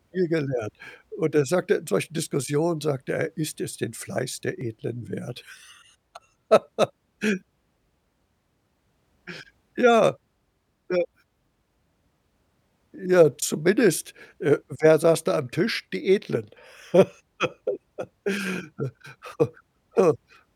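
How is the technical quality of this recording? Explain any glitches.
The speech has three brief skips, at 4.61, 10.59 and 16.57 s. Each is a tiny jump where about 20 ms of sound vanishes and the two sides butt together with no gap. They fall at a steady six-second spacing. The likely cause is audio missing between chunks. The recorder would handle the signal in six-second blocks and drop a sliver each time it closes one block and starts the next.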